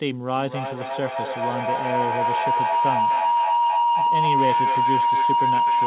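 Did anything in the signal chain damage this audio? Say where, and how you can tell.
Yes. A feedback howl: two devices on the same call share a room, so microphone-to-loudspeaker gain exceeds unity. From 0.36 s to the end, a tone near 1 kHz builds to about 6 dB above the speech and pulses roughly every 300 ms, the loop's round-trip delay.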